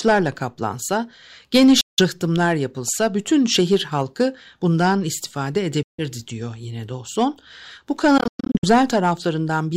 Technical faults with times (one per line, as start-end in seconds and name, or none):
1.81-2.02 Bluetooth dropout
5.83-6.04 Bluetooth dropout
8.18-8.65 Bluetooth dropout